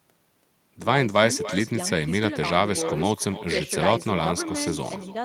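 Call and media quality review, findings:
Echo with no canceller, throughout: speech shadowed about 0.3 s later by a thinner copy about 15 dB down; far-end loudspeaker pickup returned uncancelled.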